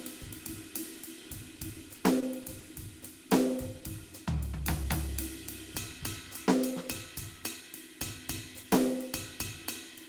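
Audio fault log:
1.55–1.59 s, short stall from a late packet: a packet arrived late and the jitter buffer ran dry, so the receiver held the last 20 ms of music until it came, then resumed at the same point. Nothing is lost, but that moment lingers with a faint buzz or dip.
1.98–2.64 s, repeated packet loss (robotic sound): packets went missing four times in this stretch, each gap no longer than 20 ms. The receiver patched them by extending the preceding sound, about 80 ms in all, while about 60 ms of music is gone, leaving a choppy sound.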